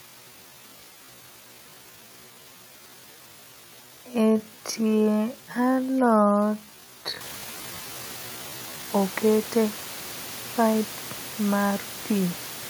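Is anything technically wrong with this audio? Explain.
Yes. From the start to 8.88 s the speech runs at about 0.53 times normal speed, roughly half pace, while its pitch stays unchanged. This is a time-stretched section, likely the result of software lengthening the audio to fill a set duration by repeating short pieces to preserve pitch. The slowed speech drags, and the pace jumps abruptly back to normal at 8.88 s. The room noise rises by about 11 dB around 7 s but stays about 18 dB below the speech.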